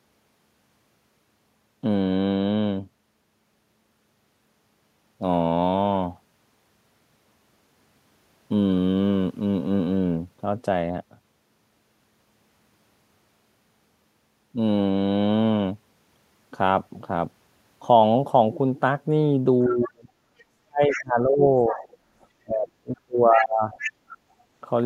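At 19.63 s a second voice rises under the speech and runs to 21.03 s, about 10 dB below the talker. This is the other side's voice leaking through. It is likely loudspeaker echo that the canceller failed to remove. It returns from 21.71 to 22.26 s, about 15 dB down, and from 23.36 to 24.16 s, about 10 dB down.

From 19.68 to 23.66 s the talker's own speech is suppressed in double talk. Both sides overlap here. The canceller likely cannot tell its talker from the echo, so it turns both down. The voice drops by up to roughly 35 dB and fades for about three seconds in all.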